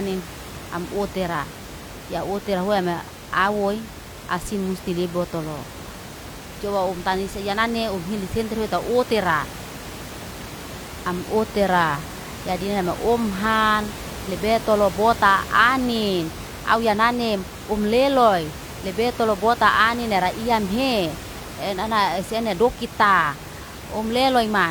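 No technical faults are audible.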